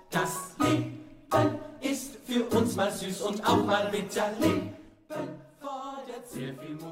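From 4.74 to 5.10 s, a fast ticking, zipping texture rides on the sound as its level drops by about 10 dB. This is zipper noise. The gain is being lowered in coarse steps of about 1 dB, around fifty times a second, with no smoothing between them, and each abrupt jump leaves a small click. Unlike a smooth fader move, this fade is heard as a chain of discrete steps rather than a glide.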